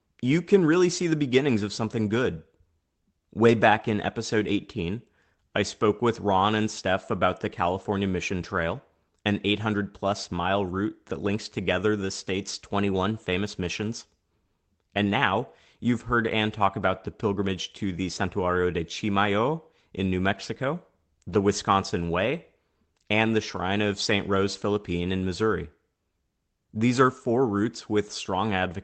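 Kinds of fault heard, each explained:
Lost packet rebuilt from error correction: at 3.47–3.53 s, just before "back in episode", and at 21.29–21.35 s, about 40 ms of sound is decoded from a low-bitrate redundant copy in the following packet, consistent with two lost packets each time, so there is no gap, just a brief, rougher, noisier patch.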